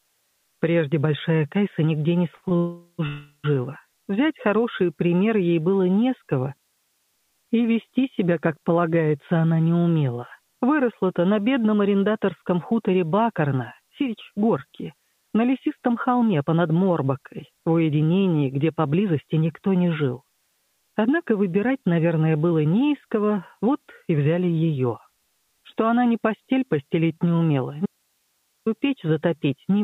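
At 2.36 s a short stall from a late packet holds the sound for 65 ms, and a second at 2.49 s adds 21 ms. The receiver stretches the last sound until the packet arrives, so nothing is lost. The result is a brief smear, not a gap.

Longer call audio freezes follow at 2.57 to 3.01 s (418 ms) and 3.07 to 3.46 s (371 ms). Each is likely a run of held-up packets draining the jitter buffer, so the held sound buzzes or hisses and fades before resuming where it stopped. The freeze at 6.57 to 7.16 s fades almost at once into 560 ms of silence. Unlike the stalls, these are long enough to hear as interruptions.

From 12.42 s to the end, a jitter buffer speed-up plays the audio at about 108 percent. It trims short pitch-period pieces, about one and a half seconds in total, so everything sounds hurried while the pitch stays unchanged.

At 27.86 to 28.66 s, an audio dropout to a faint residue abruptly removes the signal for 803 ms, likely a break ahead of a still-live path. 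The gap holds hiss roughly 50 dB down. That sets it apart from the freezes, which fade out rather than cut off.

Throughout, the call codec path keeps the band below 4 kHz.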